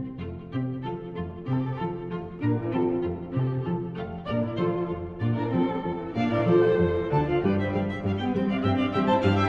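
From 0.14 s to 9.46 s, clock slip clicks form a soft rattle roughly every 50 ms, likely from unsynchronised device clocks about 400 ppm apart slipping one sample each time.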